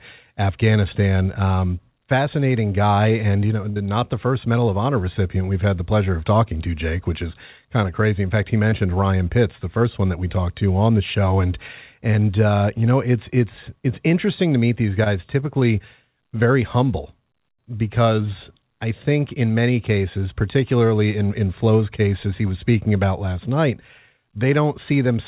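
Speech carried over a WebRTC call path whose band stops at 4 kHz, which fits G.711 A-law at 64 kbps. At 3.70 to 3.78 s there is a burst of packet loss: about 60 ms of audio never arrived, and the receiver extended the last sound for roughly 57 ms as a fading buzz or hiss before resuming further along, with that stretch missing. At 8.70 to 8.74 s and again at 15.04 to 15.08 s, short concealed packet loss leaves about 20 ms gaps, each patched with about 19 ms of synthesized continuation and then blended back, heard as a brief smear or wobble.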